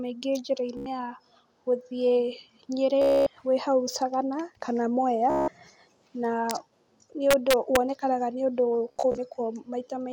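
Bluetooth stutter at 0.77 to 0.86 s, 3.02 to 3.27 s and 5.30 to 5.48 s: audio packets arrived late or not at all, so the receiver kept replaying its last short slice of speech. This produces a buzzing, machine-gun repetition lasting about 87 ms, 247 ms and 174 ms. After each gap the speech resumes further along, as though it had kept running underneath. Integer overflow at 6.51 s and again from 7.31 to 7.76 s: loud peaks overshot the largest representable value by about 2 dB and about 1 dB, and instead of limiting they wrapped to the opposite sign, flipping across the full range. The result is harsh, violent cracks, far sharper than ordinary clipping. Bluetooth stutter returns from 8.89 to 9.18 s, this time as broken, scattered dropouts totalling about 145 ms. The longest run of repeats is about 44 ms, which gives a choppier, intermittent buzz.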